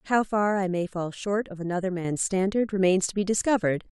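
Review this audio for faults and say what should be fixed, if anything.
At 2.05 s the speech and its background noise step up together by about 6 dB and stay louder to the end. This is a sudden gain jump, likely from a digital gain setting applied between two samples with no ramp. Ramp any gain change over a few milliseconds instead of switching it instantly.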